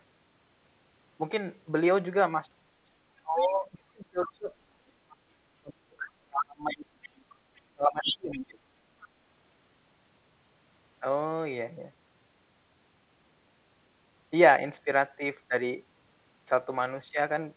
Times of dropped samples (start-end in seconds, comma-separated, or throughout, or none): none